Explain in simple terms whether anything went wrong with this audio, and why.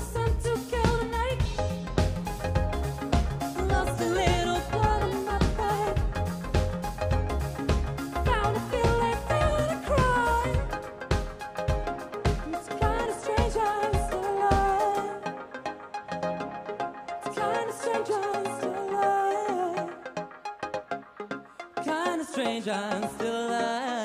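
At 12.14 s and again at 18.34 s the audio jumps forward. A tiny sliver is missing at the first spot and a longer bit at the second. This is a dropped buffer (overrun), likely because the recording software fell behind and lost those chunks.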